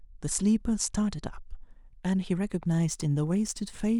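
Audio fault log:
2.48–4.00 s, sample clock jitter: a fine hiss and roughness rides on the speech, strongest on loud, bright sounds and gone in pauses. The converter's clock wanders by a couple of microseconds, so samples land early or late, leaving error about 35 dB below the signal.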